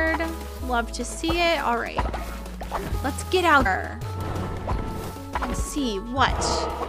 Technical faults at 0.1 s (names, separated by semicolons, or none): none